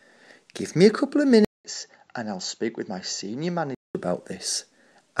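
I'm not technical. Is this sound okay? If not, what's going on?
No. From 1.45 to 3.95 s the sound turns duller and a bit quieter, with a brief 200 ms gap at the change and faint new background noise. That's likely an input switched to a poorer device, before switching back.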